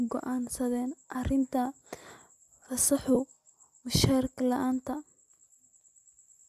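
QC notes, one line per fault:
1.14 s and 3.15 s, lost LE Audio frames. Each is one 10 ms gap, filled with the last spectrum at random signs. Speech briefly smears into noise.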